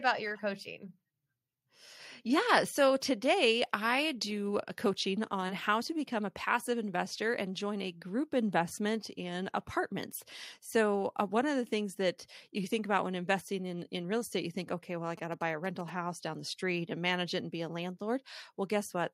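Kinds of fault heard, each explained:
GSM signalling bursts: a nearby 2G handset transmitting brief groups of radio bursts while signalling, not during a steady call, and the audio circuitry rectifying that RF into the signal path. Here it appears from 15.18 to 15.9 s, between "think okay well I" and "down the street and", as a galloping dit-dit-dit of short buzzes repeating at about 217 Hz, sitting well below the speech at roughly 15 dB down.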